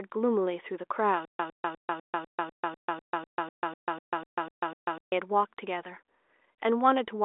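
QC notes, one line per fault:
1.25–5.12 s, stutter with silent gaps: the stream likely stalled, replaying its last 106 ms fragment every 249 ms with 143 ms of digital silence between, so that stretch of speech is lost.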